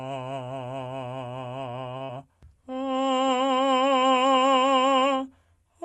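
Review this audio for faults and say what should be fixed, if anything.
Around 1.97 to 2.02 s there's a short stall from a late packet. The jitter buffer ran dry, so the music's last sound got stretched by about 30 ms until the packet arrived. Nothing is lost, but it hangs slightly and adds 30 ms of delay. Prevent it with a little more jitter-buffer headroom.

Right after, from 2.04 to 2.18 s, there's a short concealed packet loss. About 40 ms of audio never arrived, and the decoder papered over it with roughly 44 ms of extrapolated sound, a few milliseconds longer than the gap, so it comes across as a brief smear. Prevent it by turning on Opus in-band FEC or using a steadier network path.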